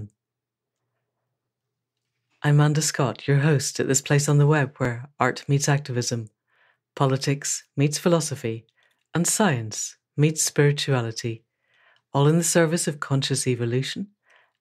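Clock drift buffer slips, likely from two clocks about 700 ppm apart, drop or repeat blocks, clicking every 1.71 s from 1.45 to 13.39 s.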